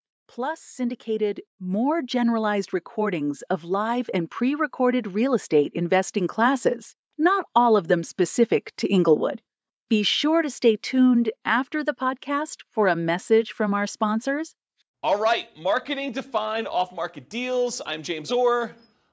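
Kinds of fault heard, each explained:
Automatic gain rising: the level control judged the input too quiet and lifted it about 11 dB from 0.35 to 6.44 s, so speech and background swell together.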